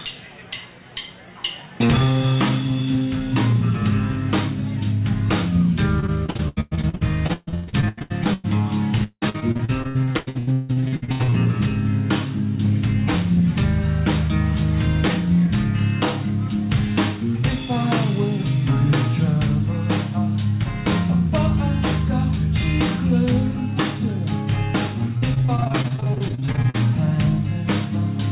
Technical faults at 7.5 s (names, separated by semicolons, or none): repeated packet loss (robotic sound)